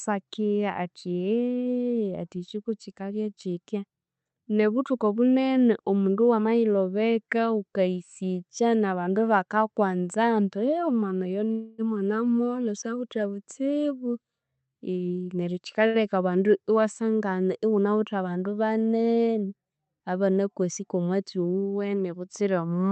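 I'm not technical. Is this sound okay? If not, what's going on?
No. At 11.51 to 11.81 s there is a call audio freeze: the speech stops and about 0.27 s of buzzy or hissy, fading filler plays. This was likely caused by a run of delayed packets. When they arrived the speech resumed where it stopped, so nothing is lost, just a pause inserted.

From 14.96 to 15.80 s comes a jitter buffer speed-up. To catch up on that built-up delay, the receiver cut many tiny slices, roughly 0.15 s in all. The speech plays about 19% faster at normal pitch and sounds rushed.

Right after, at 15.87 to 15.97 s, a short stall from a late packet: one packet wasn't ready, so the last sound is stretched by about 76 ms, giving a brief held or slightly buzzy moment before speech continues.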